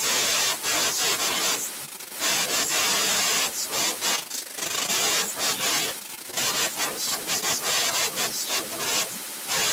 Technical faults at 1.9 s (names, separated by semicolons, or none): filter restarted on every block; repeated packet loss (robotic sound)